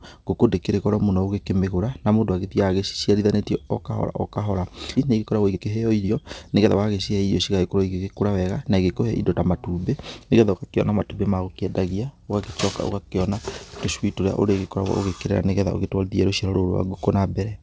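At 4.96 s the speech jumps abruptly forward with no gap, as though roughly 0.7 s of it were simply missing and the two sides spliced together. This is a skip ahead: a stretch of audio was dropped, either on the way or by the jitter buffer when it overflowed, while later audio was already waiting.

From 5.06 s to 6.75 s the speech sounds hurried, running about 115% of normal speed while keeping its pitch. This jitter buffer speed-up removed around a third of a second in many tiny pitch-period-sized cuts to work off the built-up delay, over a band that stops at 8 kHz, consistent with G.722 at 64 kbps.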